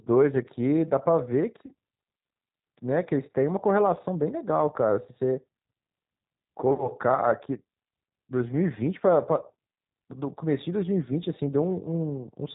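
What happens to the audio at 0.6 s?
At 0.6 s you're hearing G.729 codec damage, and it runs through the whole clip. The speech is rebuilt from a vocal tract filter, a pitch predictor and sparse pulses, which sounds like an 8 kbit/s stream. Nothing survives above 4 kHz, so it comes across as muffled, rough and a bit synthetic.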